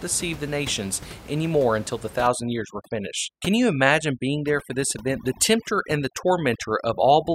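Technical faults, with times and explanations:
2.27 s to the end, overdone noise removal: just after "any more until the", the room noise drops and breaks up into twinkling specks. A noise reduction stage is working too aggressively. The room noise sits about 18 dB below the speech, and the stage pushes individual frequency bands down or out whenever they come close to its noise estimate, taking the quieter parts of the speech with them.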